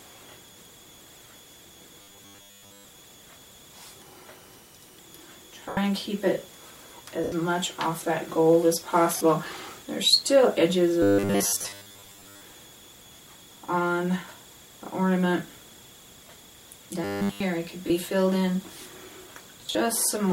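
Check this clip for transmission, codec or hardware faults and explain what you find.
Two kinds of fault are present: a recurring robotic buzz and a series of short dropouts from lost LE Audio frames.

From 2.02 to 2.85 s, 11.02 to 12.41 s and 17.04 to 17.40 s, the sound takes on a rigid 100 Hz buzz, the robotic sound from repeated short buffers. The likely cause is audio arriving too seldom, so the last 10 ms is looped in place of the missing signal. About 70% of the sound is repeated in the first two stretches, and nearly all of it in the third. The sound becomes metallic and only loosely follows the original.

Lost LE Audio frames occur at 5.69 to 5.77 s (80 ms), 7.24 to 7.32 s (80 ms), 9.17 to 9.21 s (40 ms), 11.62 to 11.65 s (30 ms), 13.16 to 13.19 s (30 ms), 16.24 to 16.36 s (50 ms scattered over 120 ms), 17.87 to 17.90 s (30 ms) and 19.67 to 19.75 s (50 ms scattered over 80 ms). 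The LC3 decoder fills each gap by reusing the last spectrum with randomised signs and fades it after the first few frames. Tones in these spots smear into noise.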